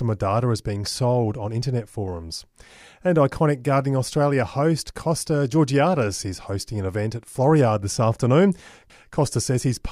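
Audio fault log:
No faults heard anywhere in this speech recording.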